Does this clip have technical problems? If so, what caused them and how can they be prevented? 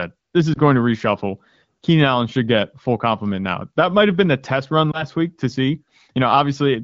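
Yes. Two lost AMR speech frames break the sound: one at 0.54 to 0.59 s, between "this is" and "to reshuffle", and one at 4.92 to 5.05 s, between "been the test run" and "week to see". Each brief dip, which fits a single lost 20 ms frame, comes from a radio error corrupting the frame. The wideband decoder then repeats its last pitch and vocal tract settings at reduced gain. On a spectrogram this appears as a short smeared patch with weakened energy; the waveform shows a brief amplitude sag. Stronger radio coverage or more robust channel coding with retransmission would prevent these losses.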